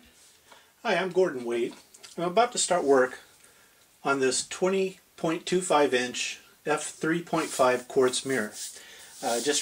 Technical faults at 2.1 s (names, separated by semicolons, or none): none